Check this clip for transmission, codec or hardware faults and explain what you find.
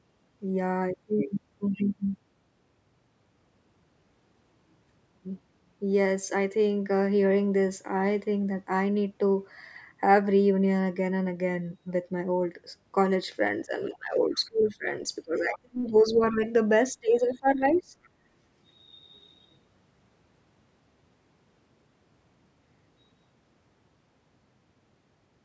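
Two related faults cluster between about 13.7 and 17.9 s of the speech, both from the call's echo handling.

Speech suppressed in double talk: the talker's level dips briefly at 13.66–13.72 s, then drops hard at 13.89–14.87 s, 15.25–16.42 s and 16.95–17.93 s. The deepest cut is about 35 dB, near-silence, in the middle span, and about 20 dB in the others. The likely cause is the echo canceller, unable to tell the talker from loudspeaker echo while both sides spoke, clamping down on everything.

Other side's voice leaking through: faint scraps of a second voice appear at 13.93–13.97 s, 15.95–16.01 s and 17.71–17.82 s. They sit well below the talker, about 20 to 30 dB down, and are short. They likely come from loudspeaker playback reaching the microphone and escaping cancellation, landing inside the suppressed stretches. The call's normal microphone processing is audible in the band limit, with nothing above 8 kHz.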